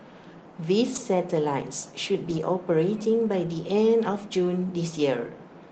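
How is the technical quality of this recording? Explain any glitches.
The recording has two brief patches of degraded sound, both from a lost packet rebuilt from error correction, heard through a call path whose Opus coding tops out around 8 kHz. At 0.95–0.97 s and again at 2.29–2.43 s, packets were lost and the decoder played low-bitrate backup copies instead, so there is no gap, just a rougher, noisier stretch. The first lasts 20 ms and the second holds about 80 ms of rebuilt audio, which fits four separate 20 ms packets.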